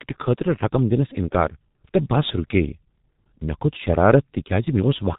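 From start to finish, the speech carries heavy G.723.1 codec damage: a low-rate telephony coder, consistent with roughly 6 kbit/s, rebuilds the voice from slowly updated models, leaving it muffled, hoarse and with smeared consonants. A spectrogram shows nothing above 3.8 kHz and blurred fricative bursts.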